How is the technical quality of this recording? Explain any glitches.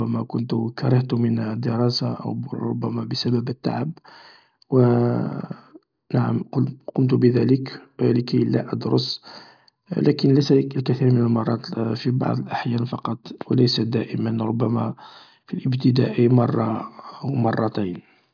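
No glitches are audible anywhere.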